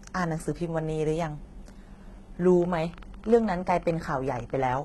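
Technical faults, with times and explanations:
Throughout, HE-AAC compression: likely cause of gritty, lispy sibilance with heavy coding damage; spectrogram shows copied, smeared treble ending near 11.8 kHz.
2.62–4.80 s, train of clicks: about ten sharp ticks per second, unevenly spaced, roughly twenty, near signal level; thin vertical spikes on waveform and spectrogram, likely interference.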